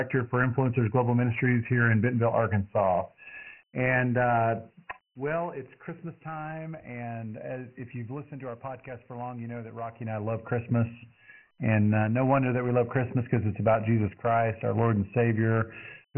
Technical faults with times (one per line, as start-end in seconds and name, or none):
0.00-16.17 Dialogic VOX ADPCM
9.87-10.78 zipper noise